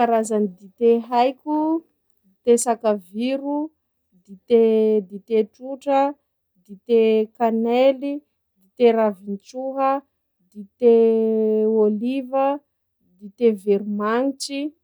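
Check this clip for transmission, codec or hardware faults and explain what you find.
Nothing to report: the speech comes through with no audible transmission, codec or hardware faults.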